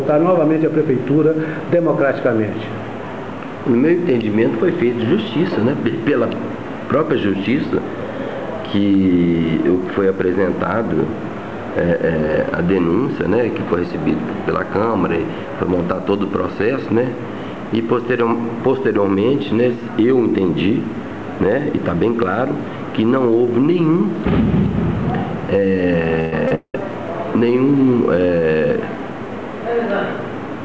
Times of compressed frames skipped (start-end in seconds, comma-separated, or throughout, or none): none